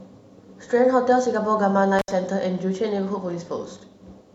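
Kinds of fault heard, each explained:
Intermittent contact: a loose connection briefly opens between 1.99 and 2.11 s, cutting the speech for about 69 ms with crackle at each edge and faint hiss.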